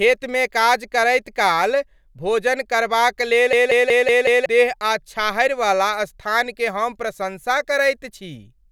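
From 3.53 to 4.46 s comes a system hang loop. The system froze while the hardware replayed one 186 ms buffer, perhaps 8192 samples. It makes a 5.4 Hz stutter, losing about a second.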